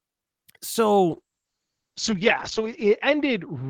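From 1.13 s to the end, the speech turns rough and watery and loses its top end. It sounds muffled above 8 kHz instead of reaching 20 kHz. This is a call bitrate drop: the encoder fell from 64 kbps to 8 kbps and stayed lowest for about 1.5 s. It coded coarsely and cut the high frequencies.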